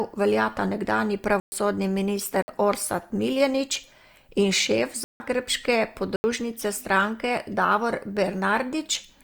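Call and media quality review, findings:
Block of digital silence, four dropouts: 1.40 s (120 ms, after "veljata nekdanji"), 2.42 s (56 ms), 5.04 s (160 ms, after "in šef"), 6.16 s (80 ms). Hard cuts. Playback path: output buffer not filled in time, gap zero-filled.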